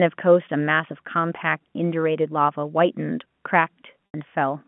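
Speech carried over a G.711 telephone line, with the band running from 150 Hz to 3.4 kHz. At 4.07 to 4.14 s there is packet loss with pitch repetition. The last pitch period is repeated to cover an 80 ms gap, so the sound briefly holds with a buzzy tone. That gap fits four lost 20 ms packets.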